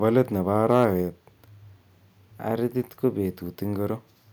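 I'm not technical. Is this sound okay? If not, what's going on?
No. From 0.70 to 0.85 s the loudest part of the speech turns harsh and crackly. This is microphone overload, likely from the input level being set too high, so the tops of the strongest peaks get flattened off at the limit.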